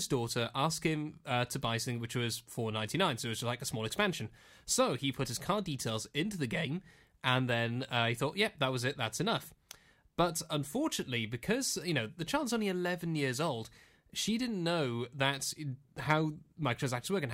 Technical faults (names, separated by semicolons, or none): none